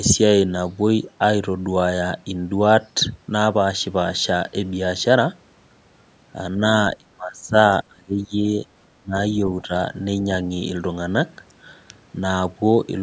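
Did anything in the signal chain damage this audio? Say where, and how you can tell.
Yes. The speech ducks and breaks up in four places: 6.98 to 7.54 s, dropping by about 30 dB, then 7.88 to 8.34 s and 9.00 to 9.15 s, both by about 25 dB, and a lighter dip of about 10 dB from 9.62 to 9.71 s. This points to call processing, likely speech suppressed in double talk, where the echo canceller mistook the near talker for loudspeaker echo and attenuated both.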